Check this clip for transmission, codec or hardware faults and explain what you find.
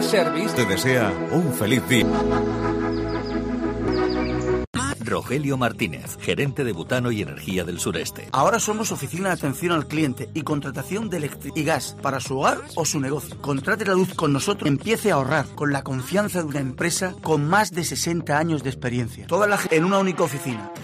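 The clip has one kind of fault, damaged data in a compressed stream, occurring five times: at 2.02, 3.88, 11.50, 14.65 and 19.67 s. Corrupted bytes make the decoder misread those frames and hunt for the next valid header, producing brief chirps or blips. A clean dropout would instead leave silence.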